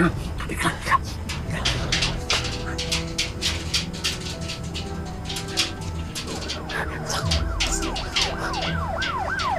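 No technical faults are audible.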